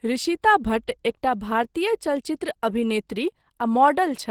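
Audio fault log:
throughout: Opus compression. The speech is plainly damaged by low-rate coding, consistent with about 16 kbps. The artefacts point to the encoder's hybrid mode, with a speech-oriented core for the lower band and transform coding above it. The result is a muffled, hoarse quality. Upper bands sound filled with folded or noisy content rather than real detail, so they come across as grainy and rough, not as holes. Content still extends to about 20.2 kHz. This is likely from Opus encoding.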